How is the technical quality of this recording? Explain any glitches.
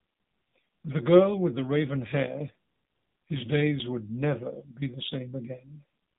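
The technical quality is poor, with two faults.

The whole recording carries plainly audible AMR narrowband mobile codec damage. The speech was squeezed to 8 kHz sampling at about 7.4 kbps. Nothing above 4 kHz survives. A coarse vocal-tract model rebuilds each frame, so the voice sounds muffled, buzzy and synthetic.

AMR bit errors hit from 5.04 to 5.15 s, about 0.12 s. That span fits roughly five 20 ms frames. A few percent of the weakly protected bits flipped, misplacing excitation pulses and fine parameters. Pitch and level hold, but the voice briefly turns hoarse, scratchy and gargly.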